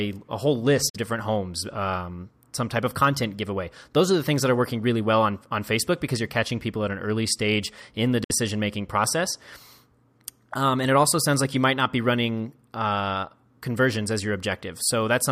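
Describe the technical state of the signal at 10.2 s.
At 10.2 s the speech signal is intact, with no fault audible at that moment.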